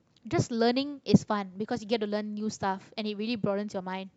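From 1.56 s to the end, the speech shows a Bluetooth SBC bit pool drop. The link starved the top sub-bands and coarsely quantised the rest, a sound which fits a bit pool roughly halved to around 110 kbps. Treble dulls and gritty noise appears, and a spectrogram shows the upper band abruptly emptied.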